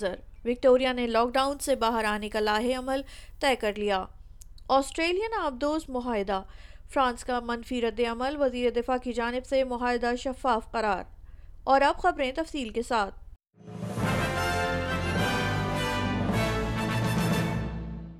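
From 1.33 to 3.76 s the sound turns thin, bright and hissy, treble about 11 dB hot at 10 kHz: pre-emphasis left on, an FM 50 µs boost never de-emphasised.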